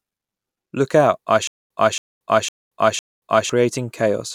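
A stutter with silent gaps runs from 1.47 to 3.50 s, after "out I". A 275 ms speech fragment repeats four times every 506 ms, each followed by 230 ms of digital silence. A stalled stream likely replayed its last fragment on each retry, so that stretch of speech is lost.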